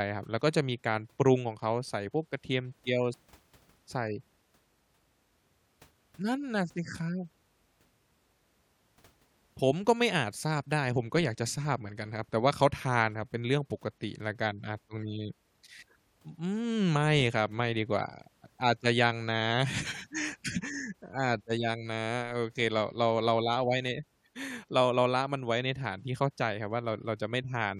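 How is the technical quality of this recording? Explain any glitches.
No glitches or technical faults can be heard here.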